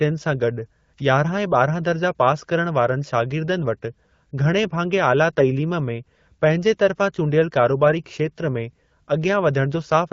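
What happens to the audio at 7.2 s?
Nothing goes wrong at 7.2 s: the speech carries on intact through that moment, heard through HD Voice (AMR-WB) coding at 12.65 kbit/s, a rate at which that codec keeps speech clear.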